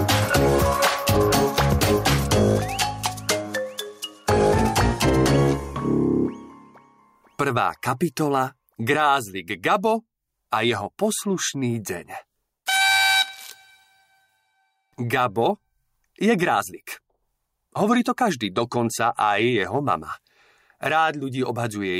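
All the way through there's gain pumping: the gain swings down by around 10 dB whenever something loud arrives. Likely the input gain was set far too hot and a fast limiter kept clamping it, leaving everything squashed.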